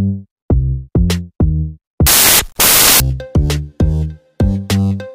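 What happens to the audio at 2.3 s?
Samples built from the wrong bytes, running from about 2.07 s to 3.00 s, cover the moment at 2.3 s. Over that stretch the bytes making up each sample are assembled incorrectly, whether misaligned by one byte or taken in the wrong order, so the rapidly fluctuating low-order bits end up as the dominant part of every value. The result is a burst of loud, harsh broadband noise that replaces the sound for nearly a second.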